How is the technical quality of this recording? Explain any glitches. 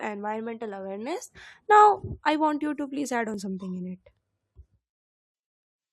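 Two small glitches stand out, both from overlap between stream segments. The first comes at 1.35 s, right after "environmental awareness," and the second at 3.34 s, between "you to please add" and "something in it." Two adjacent chunks carried overlapping time stamps, and the player trimmed the overlap as if it were duplicated audio. It wasn't, so 5 and 13 milliseconds of real speech vanished, the waveform jumped, and each spot sounds like a quick click or micro-skip. The roughly 2 s gap between them fits segments about 2 s long.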